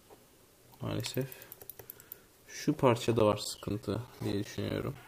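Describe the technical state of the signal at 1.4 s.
At 1.4 s the signal is intact, with no audible fault at that moment.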